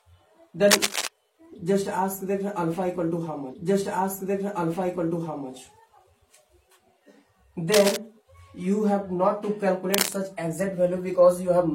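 A burst of harsh, uneven scratching from 0.68 to 1.07 s, about as loud as the sound itself, is cable scratch noise, likely from a worn cable, connector or control whose contact resistance jumped around as it moved. From 3.49 to 5.48 s about 2.0 s of programme plays a second time, with a small blip at the jump back: a stream segment repeated because the player fetched or queued the same segment twice. The same crackly rustle returns at 7.72 to 7.97 s, somewhat quieter, and at 9.94 to 10.13 s about as loud as the sound itself.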